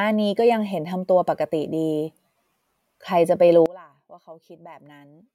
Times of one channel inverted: 3.66-5.34

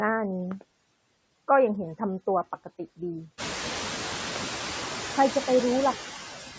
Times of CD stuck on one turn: none

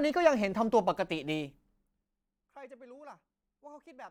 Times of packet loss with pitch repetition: none

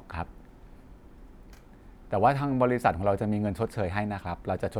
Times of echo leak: none

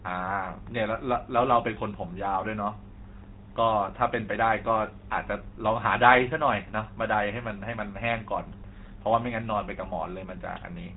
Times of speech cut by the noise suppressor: none

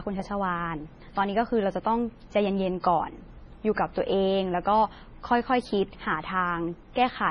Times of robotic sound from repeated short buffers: none

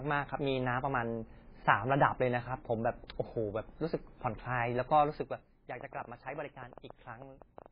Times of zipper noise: 5.10-5.53

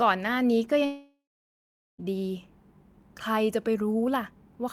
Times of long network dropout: 0.85-2.00

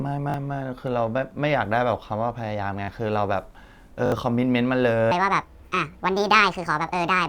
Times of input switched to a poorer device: none

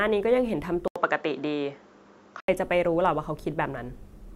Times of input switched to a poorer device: 0.88-2.48

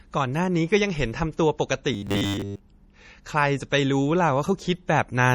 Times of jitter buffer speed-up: none

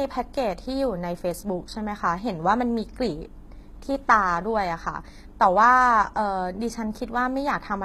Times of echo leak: none

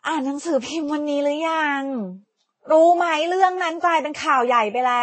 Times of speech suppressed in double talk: none

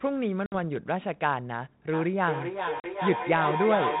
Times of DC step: none

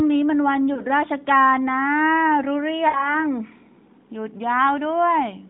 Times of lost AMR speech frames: 0.74-0.82, 2.88-3.20

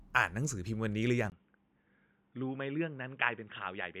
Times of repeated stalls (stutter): none

